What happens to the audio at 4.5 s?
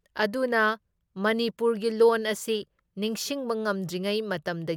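Nothing goes wrong at 4.5 s; the speech runs on intact through that point with no audible fault.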